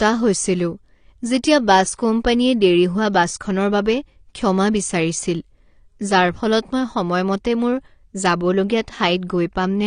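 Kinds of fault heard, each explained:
AAC compression: The speech sounds dull and smeared with a clearly audible warbling, fizzy texture, most noticeable on sibilants and held vowels. This is likely lossy AAC-LC coding at a low bitrate, which fits roughly 32 kbps. The encoder discards detail its hearing model judges inaudible and drops everything above about 9.7 kHz. A spectrogram shows a hard ceiling at 9.7 kHz with nothing above it, plus patchy holes and blocky, flickering energy below.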